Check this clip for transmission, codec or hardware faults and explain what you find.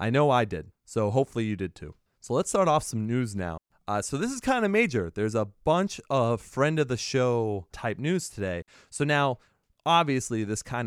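Two digital wireless dropouts break up the speech. The first runs from 3.58 to 3.70 s, a mute of about 127 ms; the second from 8.62 to 8.68 s, lasting 60 ms. Each time the receiver stops getting enough intact data from the radio link and mutes itself with a very fast fade, leaving a clean hole of near silence. Unlike an analogue wireless dropout, there is no hiss or noise burst around the gaps.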